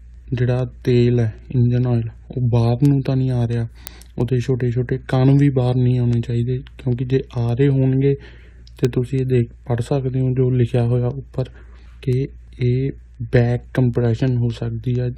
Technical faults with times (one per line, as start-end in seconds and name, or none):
0.14-15.18 word clock ticks